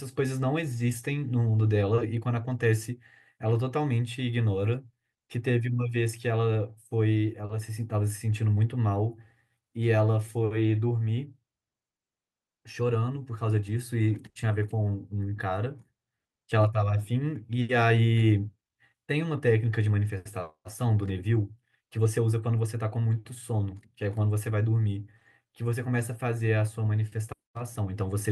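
A burst of packet loss hits this speech clip at 14.29 to 14.38 s. A run of consecutive packets never arrived in time, so the receiver covered roughly 60 ms by extending the last sound it had and fading it down, which is heard as a brief held buzz or dying hiss. When the audio resumes it has skipped ahead, leaving 60 ms of speech simply missing.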